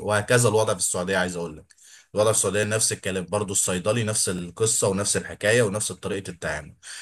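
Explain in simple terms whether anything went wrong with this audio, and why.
A short click in the speech about every 1.76 seconds, from about 0.9 s to about 6.1 s, four times in all, is a sign of clock drift buffer slips. The likely cause is two devices running at slightly different speeds, so every so often a small chunk of audio gets skipped or repeated.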